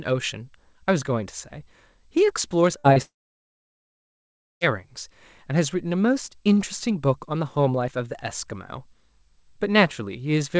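Burst of packet loss at 2.78 to 2.87 s: about 60 ms of audio failed to arrive in time, so the receiver stretched the last sound and faded it down over that span. It comes across as a brief held buzz or dying hiss, then the audio jumps ahead with those 60 ms gone.

Short concealed packet loss at 2.93 to 2.99 s: another 30 ms never reached the decoder, and the receiver patched the hole by extrapolating from what came just before, then crossfading back. The result is a quick smear or wobble.

Long network dropout at 3.02 to 4.64 s: the sound briefly continues as a fading tail, then falls to silence for about 1.5 s before resuming further on, with roughly 1.6 s of audio never heard. The likely cause is a stretch where no packets reached the receiver, which extended its concealment only briefly before muting. Across the clip the band stops at 8 kHz, which fits a G.722 call path at 64 kbps.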